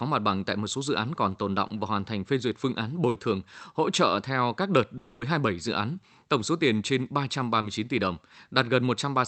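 At 1.67 to 1.71 s there is a short concealed packet loss: about 20 ms of audio never arrived, and the decoder bridged it by extending the preceding sound before blending back. It is heard as a brief smear, shorter than the later gaps.

At 3.09 to 3.17 s, between "phê duyệt phương án" and "thường hỗ trợ theo", a burst of packet loss removes about 60 ms. The concealment holds the last sound and lets it fade before the speech picks up further along. It is longer than the short losses, with an audible decaying sustain rather than a quick blur.

From 4.97 to 5.23 s, just after "trợ theo các đợt", about 240 ms of speech is replaced by a fading synthetic continuation of the last sound, likely from a long network dropout. The gap never drops to silence, and the synthetic tail stretches much longer than in the burst.

At 7.61 to 7.65 s, between "tổng số tiền trên" and "tỷ đồng", another short concealed packet loss covers about 20 ms with the same brief smear. 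All of this passes through a call codec whose top end stops near 8 kHz, which fits Opus at around 32 kbps.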